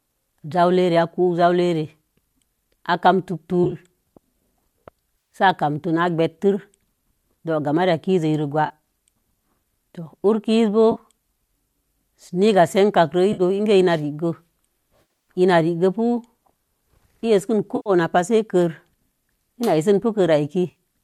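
Speech with AAC frame loss with concealment: brief smeared, phasey patches at 3.64–3.75, 5.18–5.35, 8.67–8.72, 10.92–10.99, 13.33–13.42 (after "niga senkakro"), 15.02–15.28 (before "ina rigge"), 17.76–17.90 and 20.71–20.78 s. The decoder bridges missing frames by reusing the last good spectrum, and the short dropout granularity points to the likely low-delay AAC coding.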